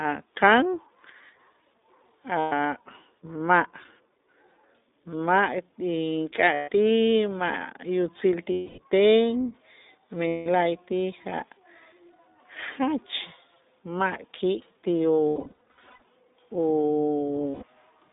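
The whole clip carries iLBC codec coloring. The speech is band-limited to roughly 250 Hz to 3.7 kHz. It sounds rough and slightly synthetic, consistent with a 15.2 kbps setting.

Lost iLBC frames cause dropouts at 2.40–2.52 s, 6.54–6.70 s, 8.52–8.80 s after "yutzil ti", 10.28–10.47 s, and 17.50–17.64 s. Each gap is filled by a held, buzzy repeat of the last pitch cycle. Between 15.28 and 16.02 s, short losses are scattered in brief bursts. The speech recovers almost immediately after each one.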